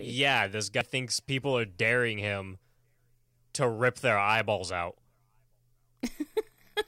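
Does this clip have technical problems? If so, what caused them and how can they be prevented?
Yes. At about 0.72 to 0.81 s the speech lurches forward, just before "thinks people are daring". This is compressed frames skipped: about a tenth of a second of encoded audio was never played, because those frames were missing from the file or the decoder rejected them as corrupt. The jump equals a whole number of frames. To prevent it, verify file integrity after transfer and use a transport or container with error checking and retransmission so damaged or lost frames are recovered before decoding.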